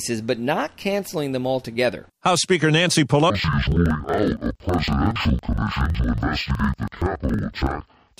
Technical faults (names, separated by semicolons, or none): interleaved audio read as planar